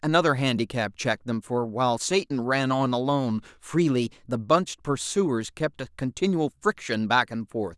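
A drift correction step runs from 3.78 to 4.35 s: the speech speeds up about 5.4% and rises about 91 cents, then snaps back, likely a clock-matching rate jump.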